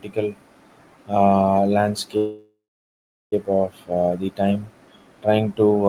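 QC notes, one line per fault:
2.17–3.34 s, call audio freeze: the last sound stretches into a fading buzz, then 0.73 s of silence, and the speech picks up at "of uh the time" with nothing lost, 1.15 s late. Likely a jitter buffer running dry on delayed packets.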